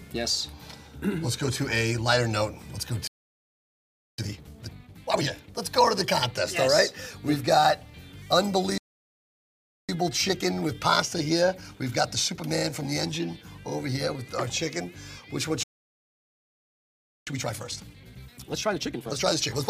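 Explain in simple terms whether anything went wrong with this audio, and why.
Three playback stalls interrupt the audio: at 3.07 s and 8.78 s the sound cuts out for about 1.1 s each, and at 15.63 s it stops for about 1.6 s. Each time it breaks off mid-flow and simply goes silent. The likely cause is that the player ran out of incoming data, or its processing was briefly held up, so it had nothing to send to the speakers until it recovered.

After each silence, time-compressed catch-up follows. The player trims out tiny slices and blends the joins so the audio runs faster without changing pitch. From 4.18 to 5.28 s it plays at double speed. From 9.89 to 12.89 s it is only mildly hurried, at 1.1 times normal. From 17.27 s to the end of the clip it runs at 1.5 times normal.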